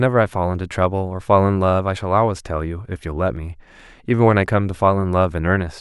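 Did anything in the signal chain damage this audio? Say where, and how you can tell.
Yes: a tiny run of dropped samples, likely lost at the driver or buffer stage, makes the waveform jump at 0.55 s, heard as one sharp click across a fraction of a millisecond.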